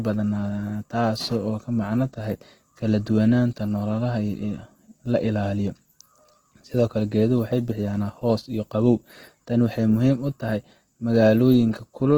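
Throughout the speech, the sound is rough, grainy and noisy in texture. This is likely Opus compression in its music mode, at a low rate near 16 kbps. Starved bands are filled with folded or noise energy. The damage is plainly audible.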